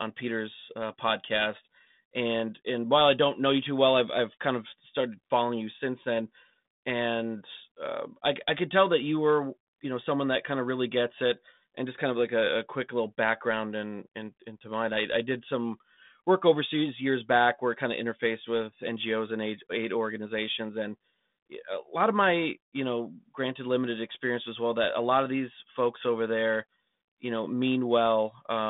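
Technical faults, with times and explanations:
No faults to report; the speech runs over a 32 kbit/s G.726 telephone path with nothing above 3.8 kHz, as that line is built to carry.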